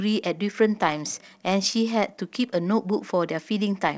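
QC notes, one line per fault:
Nothing stood out on listening to this speech.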